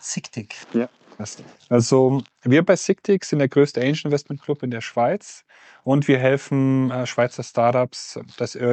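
No technical faults detected.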